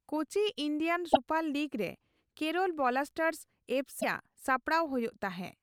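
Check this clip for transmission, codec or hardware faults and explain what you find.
Two short glitches from damaged data in a compressed stream, at 1.12 to 1.17 s and 4.00 to 4.04 s. Corrupted bytes there make the decoder misread those frames and lose sync while it hunts for the next valid header, so each one comes out as a brief glitch in the speech.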